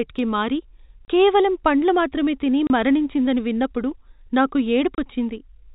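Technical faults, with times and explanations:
1.05–1.08 s, 2.67–2.70 s and 4.95–4.98 s, packet loss filled with silence: three 30 ms dropouts, right after "కి మారి", after "కేవలం పండ్లు మాత్రమే తిని" and after "తిని మరణించిందని విన్నపుడు నాకు". Each fits one lost 30 ms packet replaced by dead silence, so the speech cuts off abruptly at hard edges. The band-limited G.711 phone sound is still audible around the gaps.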